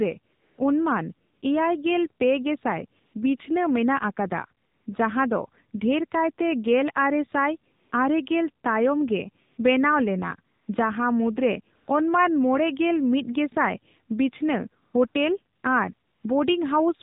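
From the start the speech runs through the AMR narrowband mobile codec at 7.4 kbps, so everything above 4 kHz is gone and the vocal-tract model, fed too few pulses per frame, leaves the voice plainly buzzy and synthetic.

AMR comfort noise then cuts in thirteen times between 0.34 s and 16.24 s, in pauses lasting 20 ms up to 300 ms. The phone stopped sending speech frames there, so the real background drops out and smooth synthetic noise switches in.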